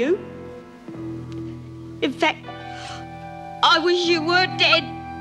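At 2.84–2.90 s and 4.72–4.75 s, corrupt frames decoded: damaged bits misplace energy briefly, giving a chirp, squeak, blip or burst of noise. The second is much louder.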